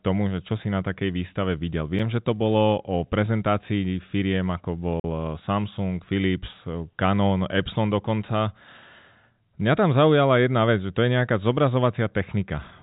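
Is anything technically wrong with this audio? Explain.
Yes, there are two blocks of digital silence, most likely where the program failed to fill its output buffer in time. At 1.99 s a 5.9 ms dropout is a tick. From 5.00 to 5.04 s a 43 ms hole, consistent with a 2048-sample buffer, is a brief gap. On a waveform both appear as flat lines. On a spectrogram they show as blank vertical stripes bordered by broadband click lines.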